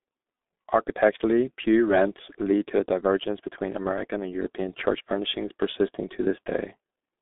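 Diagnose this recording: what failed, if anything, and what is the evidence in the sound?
The failure is at the codec stage: the speech carries heavy G.723.1 codec damage for the whole clip. The low end stops at about 200 Hz, the top rolls off near 3.6 kHz, and nothing is present above 3.8 kHz, so the sound is muffled. The hoarse texture and smeared consonants come from the coder's slowly updated voice model on 30 ms frames, which fits a bitrate around 6 kbit/s.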